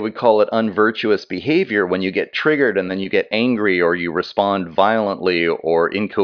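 Nothing stood out on listening to this speech recording.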